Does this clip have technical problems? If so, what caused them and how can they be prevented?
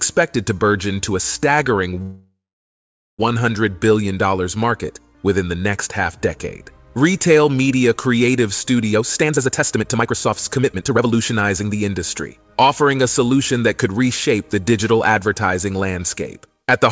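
Yes, there are two. From 2.02 to 3.21 s there's a call audio freeze: the last bit of sound gets stretched into a fading buzz or hiss, then about 0.8 s of silence, and playback resumes where it left off, about 1.2 s late. Likely cause is packets stalling and the jitter buffer running dry. A steadier network path or a deeper jitter buffer would prevent it.

From 8.92 to 12.53 s you get a jitter buffer speed-up. The receiver snips out tiny pitch-period chunks over and over to drain excess buffered audio, roughly a second in total, so the sound plays about 132% fast at unchanged pitch and feels rushed. Smoother packet delivery, or a gentler catch-up rate, would prevent it.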